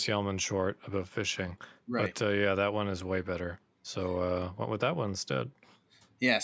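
No technical faults are audible.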